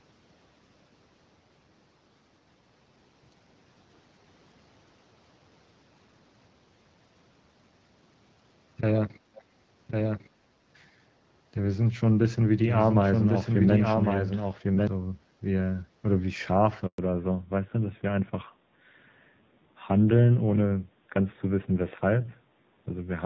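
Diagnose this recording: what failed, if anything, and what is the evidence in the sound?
Call processing stage, echo leak. At 9.35 to 9.43 s a brief scrap of the voice returns 363 ms after the original, about 25 dB below the speech. It is faint and short, a fragment rather than a sustained repeat. The likely cause is a loudspeaker on the far end whose echo canceller let part of the microphone pickup through. That residue was sent back down the call and arrives delayed.

Editing or capture stage, doubled audio track. From 9.89 to 14.87 s a second full-band copy of the speech runs roughly a second behind the first, about 5 dB quieter. It carries no decay or room colouring, and it cuts in and out abruptly at those two times. That points to a clean digital duplicate rather than an acoustic echo. The likely cause is the same audio being mixed in twice through a slower path or a misaligned edit.

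Network stage, handover gap. At 16.86 s the voice fades out within a few tens of milliseconds. Silence follows for 120 ms, until 16.98 s. No audio frames arrived during that window, so whatever was said there is gone. This fits the call switching between networks mid-stream. The receiving side had nothing to decode until the new link came up. It did not conceal the gap. It let the sound die away.

Codec stage, fallback to narrowband. From 16.98 s to the end, nothing remains above 4 kHz. The voice turns duller and rougher. Before that point the sound reaches into the wideband range, consistent with HD Voice at 12.65 kbit/s, with only light codec damage. After the handover the band limit and added roughness fit a drop to AMR narrowband at 7.4 kbit/s. The new link negotiated an older codec instead of restoring wideband.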